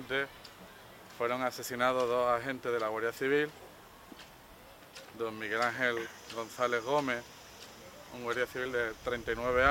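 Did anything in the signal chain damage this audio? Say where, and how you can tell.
No, nothing damaged it.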